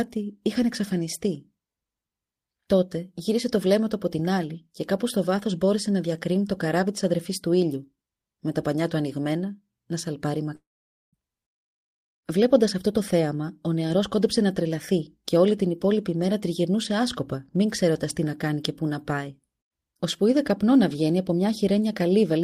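At 10.55 s the speech breaks off and does not properly resume until 11.15 s. For a short moment the last sound is smeared onward as a decaying buzz, then roughly half a second of near-silence follows. When the speech returns, about 0.58 s of it is simply gone, with no catch-up. This pattern is most likely a long network dropout: the packets stopped arriving, the receiver's concealment stretched the final sound, gave up, and muted until the stream came back.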